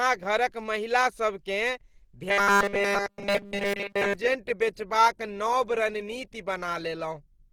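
Opus compression damage runs through the whole speech clip, likely from its music (CELT) mode at a low bitrate, near 16 kbps. Band energy survives, but fine detail is filled in. The sound turns grainy and rough. Content still reaches about 20.3 kHz.

From 2.29 to 4.14 s comes a robotic sound from repeated short buffers. Fresh audio likely arrived too seldom, so a 5 ms slice repeats across the whole span. This forces a rigid, metallic 200 Hz buzz. It ends just before "बेचबाक नब रणनीति".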